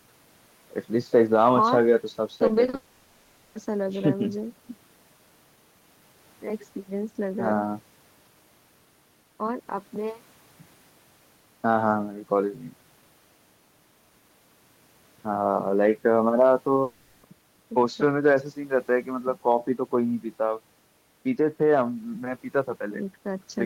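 From 2.37 to 2.75 s the speech turns choppy, the sign of repeated packet loss (robotic sound). Five short holes, none longer than 40 ms, are each patched by stretching the preceding sound, so about a third of that span is synthetic filler between real fragments. This rapid alternation between genuine audio and brief patches is what sets it apart from a single long outage.

Exactly that kind of outage follows at 2.75 s and runs to 3.57 s. Here no real speech breaks through at all: for 0.8 s the last sound is drawn out as one continuous buzz or hiss that never falls to silence, and when the speech resumes that stretch of content is simply gone. The same happens again from 16.83 to 17.25 s, a 0.4 s smear with the underlying speech missing. One unbroken fill, rather than flickering cuts, points to a likely long network dropout in both places.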